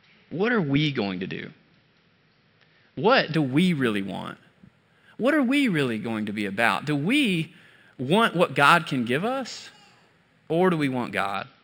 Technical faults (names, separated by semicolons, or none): imaging from linear upsampling